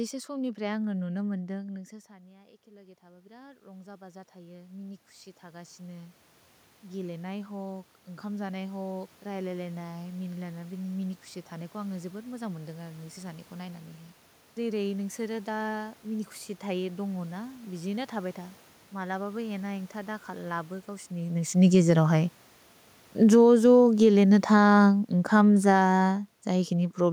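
A speech recording. After the talker moves away from the microphone around 1.5 s and the input drops by about 21 dB, automatic gain rising lifts the level by about 15 dB from 2.07 to 6.27 s, and by another 5 dB from 6.82 to 10.76 s. The room noise swells with the voice, which a talker's movement alone would not cause. After a second movement near 21 s, automatic gain falling pulls the level down by about 9 dB from 23.07 to 26.99 s, with voice and background sinking together. A brief rise of about 3 dB interrupts it from 23.58 to 24.96 s.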